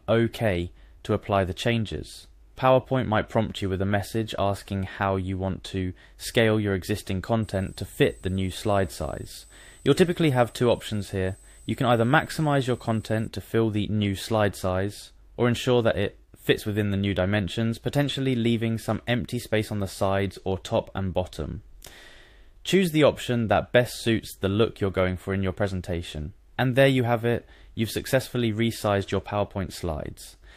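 A switching power supply in the chain dropped into an audible operating mode between 7.43 and 13.28 s, its regulation frequency falling low enough to leak into the signal path. The result is a switching supply whistle: a thin, high tone wandering between about 8.06 and 8.12 kHz as the supply's load shifts, sitting roughly 30 dB below the main sound.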